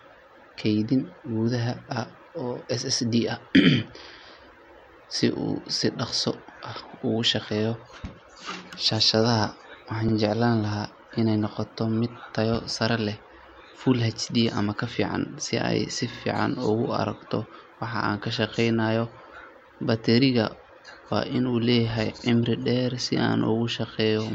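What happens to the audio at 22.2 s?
At 22.19 s the speech stutters briefly: this is an overlapping chunks fault. The audio was handled in blocks of about 6 s, and this block begins 50 ms before the previous one ended, so the stretch from 22.19 to 22.24 s plays twice in a row. Unlike a dropout, nothing goes missing and there is no silent gap. The join sounds like a tiny repeated fragment.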